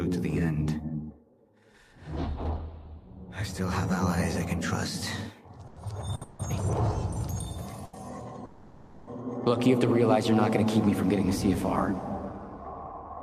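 A short stall from a late packet comes first at 5.67 s. A packet arrived after its playout time, the jitter buffer ran dry, and the receiver stretched the last sound for about 90 ms before carrying on from the same point. The sound is held slightly too long, with a faint buzzy sustain, but nothing is lost. The same stall recurs at 6.15 s, this time lasting 60 ms.

A call audio freeze follows straight on, from 6.23 to 6.41 s. The sound locks into a continued buzz for 160 ms and then resumes where it stopped, inserting a gap without dropping anything. The likely cause is packets held up in transit, emptying the jitter buffer.

Another short stall from a late packet at 7.85 s holds the sound for 80 ms, again adding delay without any loss.

A longer call audio freeze runs from 8.45 to 9.09 s, with 620 ms of concealment. The held sound turns into a fading buzz rather than silence, and after the freeze the audio picks up exactly where it left off.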